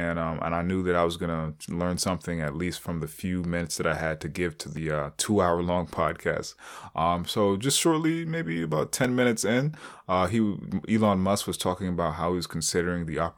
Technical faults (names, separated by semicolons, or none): dropped buffer (overrun)